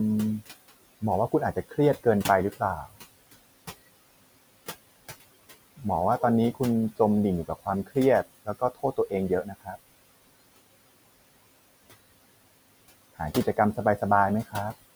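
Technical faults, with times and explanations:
throughout, noise suppressor artifacts: The suppressor lowers every frequency band it judges to be steady noise, frame by frame, by about 19 dB. The room noise, about 17 dB below the speech, therefore drops away in pauses and swells back under the speech.
1.53–1.78 s, 8.45–9.13 s and 9.29–9.76 s, speech cut by the noise suppressor: The suppressor mistakes quiet parts of the speech for background noise and turns them down along with it, by about 17 to 19 dB, for roughly a tenth to a fifth of a second within each span. Those sounds come out swallowed and faint.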